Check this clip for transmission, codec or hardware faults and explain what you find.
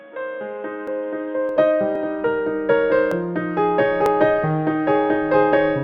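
Two faults are present: a band-limited opening section and four small skips.

From 0.0 to 1.49 s, the sound is dull and boxy. A faint new background noise sits roughly 35 dB below the signal. The level barely changes. At 1.49 s the full bandwidth returns, with no gap at the change. This likely comes from the input being switched to a poorer device, such as a headset's call profile, which passes only a narrow band and adds its own background noise.

At 0.88, 1.96, 3.12 and 4.06 s, there is a small jump in the sound. There is no silence. The audio simply skips ahead. Each loss is only a few milliseconds, and the one at 3.12 s is shorter than the rest. These are likely dropped buffers from overruns. The hardware overwrote samples before the program collected them, so the surviving edges were joined directly.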